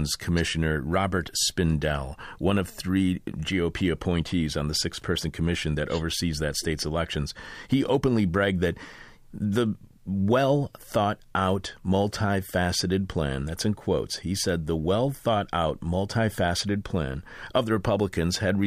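Listening through the recording, nothing stood out as a technical problem at any point.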